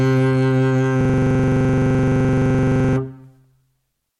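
From 1.01 to 2.96 s the music locks into a stutter, one 42.67 ms sliver repeating exactly, 23.4 times a second. This is a system hang loop: the host froze while the sound hardware kept replaying one ring buffer, which fits a 2048-sample buffer.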